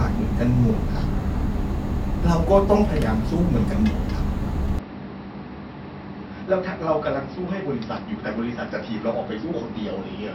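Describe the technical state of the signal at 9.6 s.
At 9.6 s the recording is still inside the stretch that runs from 4.79 s to the end, after the input likely switched to a poorer device. Nothing reaches above 5.6 kHz, the level sits about 10 dB lower, and a faint new background noise appears.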